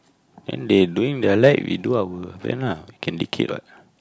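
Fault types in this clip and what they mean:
Nothing stood out on listening to the speech.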